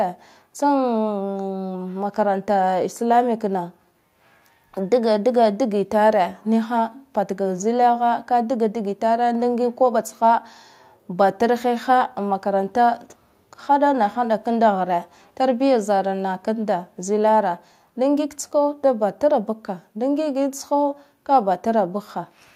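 Nothing goes wrong anywhere in this speech recording, so there's no technical fault to point to at any moment.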